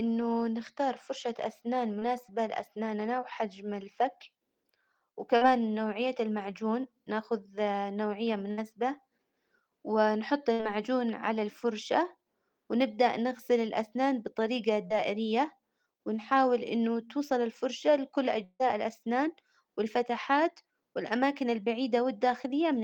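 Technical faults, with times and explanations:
1.99–2.03 s, 5.37–5.43 s and 14.87–14.92 s, short concealed packet loss: brief smears or wobbles in the speech, first between "نختار فرشة أسنان" and "لأسناننا وحجم", last after "ونبدأ نغسل الأسنان بطريجة". Some 20 to 40 ms of audio arrived too late, and the receiver papered over each hole by extending the preceding sound.
8.51–8.59 s and 10.53–10.61 s, burst of packet loss: each gap is a short held buzz or hiss that fades before speech resumes slightly further on. About 60 ms went missing in a row, so the receiver stretched the last sound while turning it down.
18.44–18.63 s, long network dropout: after "إنه توصل الفرشة لكل" a fading buzz or hiss runs for about 155 ms, then about 30 ms of silence, before "الأسنان والفتحات والأماكن". This is likely a stall in which about 160 ms never arrived, with the receiver extending the last sound until it gave out.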